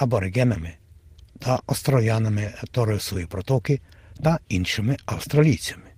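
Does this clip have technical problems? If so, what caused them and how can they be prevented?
No, I can't hear any technical problems here.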